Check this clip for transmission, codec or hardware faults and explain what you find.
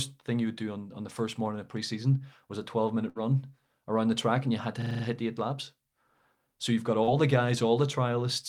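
Three faults are audible in this speech clip.

A burst of packet loss runs from 3.09 to 3.23 s. Consecutive packets failed to arrive in time, so the receiver extended the preceding sound for about 58 ms, fading it out, then resumed with roughly 60 ms of speech missing.

A system hang loop occurs from 4.82 to 5.04 s. The system stalled while the audio hardware kept replaying its ring buffer, repeating one 42.7 ms slice five times. That gives a machine-gun stutter at 23.4 Hz, which fits a 2048-sample buffer, with essentially nothing lost afterwards.

Short concealed packet loss appears from 7.03 to 7.09 s. About 40 ms of audio never reached the decoder, so the receiver synthesised a continuation of the last sound and blended back into the real signal. The result is a brief smear or wobble.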